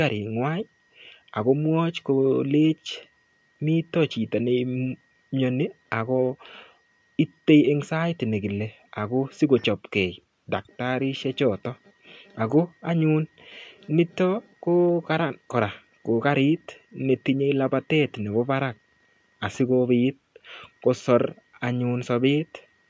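No technical faults can be heard in this speech. It has passed through a call's microphone processing, which trims the lowest bass and leaves nothing above 8 kHz.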